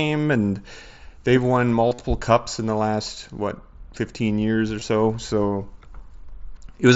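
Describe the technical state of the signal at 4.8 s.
Right at 4.80 s there's a brief dropout: concealed Bluetooth headset packet loss. Roughly 15 ms of audio never made it from headset to phone, which fits a couple of lost frames, and the receiver papered over the gap by repeating the best-matching slice of the waveform it had just played. Because the run is so short, it comes through as a tiny buzzy blip with a slight warble as the real speech picks back up, riding on the mSBC link's band limit around 8 kHz.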